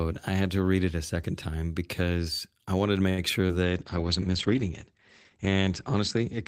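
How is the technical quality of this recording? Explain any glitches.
The speech has three network-related glitches in quick succession from about 3.1 s, ending in reduced quality for the rest of the recording.

From 3.09 to 3.20 s there is a short stall from a late packet. The jitter buffer ran dry, so the last sound is held about 86 ms and then continues unbroken. Nothing is lost, unlike the next glitch.

At 3.47 to 3.51 s, short concealed packet loss removed about 20 ms. The receiver extrapolated over the gap, leaving a brief smear or wobble where real audio vanished.

From 3.64 s to the end, a call bitrate drop takes the encoder from 32 to 10 kbps, with the lowest rate holding for about 2 s. Bandwidth falls from 20 kHz to 8 kHz, so the speech turns muffled and rough. Unlike the blips, it persists.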